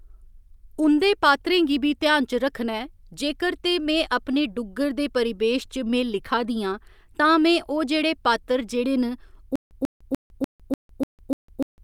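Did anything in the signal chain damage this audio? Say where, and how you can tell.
Yes. From 9.56 s to the end, playback likely stalled, replaying its last buffered fragment at each retry and then running dry. This causes a stutter with silent gaps: a 142 ms burst recurs seven times, every 296 ms, separated by 154 ms of digital silence. The speech due in that time is lost.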